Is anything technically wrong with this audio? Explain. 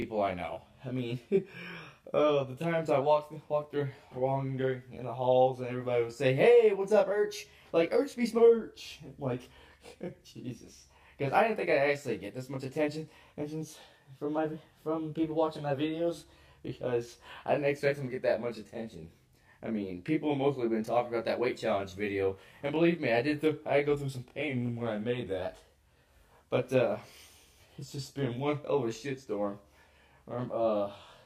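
Yes, there are two problems.

Channel delay (comb filtering) runs through the whole clip. One channel arrives roughly 20 ms behind the other, and when they are summed to mono, shared content cancels at evenly spaced frequencies. The first notch sits around 20 Hz. The result is a constant rough, slightly doubled colouring. Unlike flanging, the notches never sweep, and unlike room reverb there is no decay tail.

The four abrupt pitch-and-speed shifts are likely a drift correction step. At 3.02–3.71 s, 7.11–8.38 s and 14.37–15.74 s, playback jumps about 6.24% faster and rises about 105 cents, roughly a semitone. At 24.48–25.42 s it drops 6.24% slower and about 111 cents lower. Each time it holds steady and then snaps back, which sets it apart from the continuous wavering of wow or flutter.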